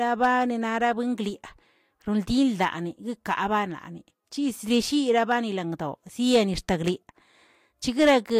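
Hard clipping cuts speech peaks flat at 0.23–0.31, 2.62–2.68, 4.73–4.77, 5.18–5.34, 6.33–6.37 and 8.00–8.17 s. Overload runs about 1 to 6 dB. Each burst crackles, worst at 8.00 s.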